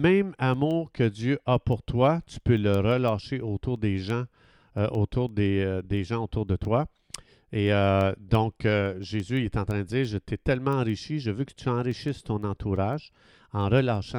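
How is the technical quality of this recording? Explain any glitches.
The recording has one fault, and it runs almost end to end.

Word clock ticks, from 0.2 to 14.12 s. Sharp ticks of uneven strength repeat steadily, about every 0.15 s, roughly seventy in total. An unlocked receiving clock drifts against the sender, likely around 150 ppm, dropping or repeating a sample at each slip.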